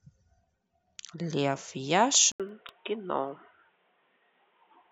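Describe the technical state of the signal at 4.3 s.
At 4.3 s it's boxy, with nothing above 3.8 kHz, from 2.32 s onward after an 80 ms gap. Likely the input switched to a poorer, narrower-band device.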